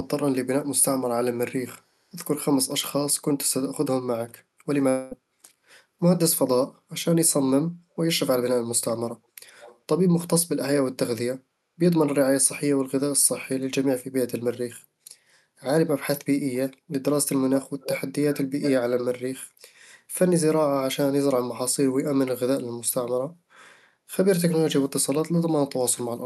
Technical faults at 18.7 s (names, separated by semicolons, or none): echo leak